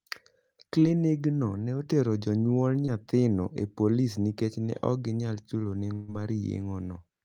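At 0.79 to 0.83 s and again at 2.85 to 2.89 s, short concealed packet loss leaves brief smears. About 20 ms went missing each time and was bridged by extending the preceding sound. At 5.93 to 6.10 s, a burst of packet loss is audibly longer. About 140 ms is replaced by a held, fading continuation with no silence, and the sound resumes further on.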